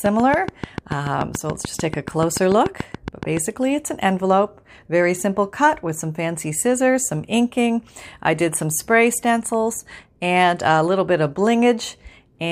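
From 0.06 s to 3.38 s a train of clicks runs through the speech: about twenty near-identical pulses at a regular 6.9 per second, peaking roughly 10 dB above the signal and ticking through pauses too. Interference from nearby equipment is the likely source.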